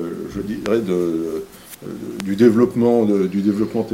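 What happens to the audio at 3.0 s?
At 3.0 s the audio runs on intact, with no dropout, click, glitch or other disturbance at that moment.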